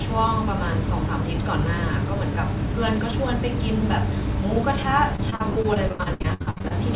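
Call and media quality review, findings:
Repeated packet loss (robotic sound), 5.16–6.72 s: choppy speech with pieces missing. Dense run of short gaps, longest 72 ms, roughly 38% of the span patched. Probable network loss or late packets at the jitter buffer. Concealment stretches the last sound over each gap.

Call path band-limited, nothing above 4 kHz, which fits G.711 mu-law at 64 kbps.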